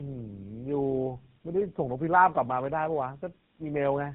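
Tandem speech coding runs throughout. Three speech coders each re-coded the previous one's output. Nothing passes 3.9 kHz. It sounds rough, muffled and warbly.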